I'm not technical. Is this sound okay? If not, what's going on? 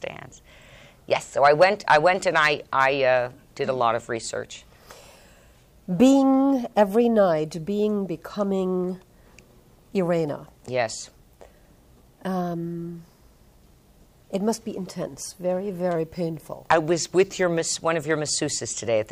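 No. There's a drift correction step from 15.96 to 17.60 seconds. For about a second and a half, the sound plays roughly 5.5% slower and drops almost exactly a semitone in pitch, then snaps back to normal. The likely cause is software that keeps two devices' clocks in sync. It briefly slowed playback in one jump to rebalance its buffer, and speed and pitch moved together.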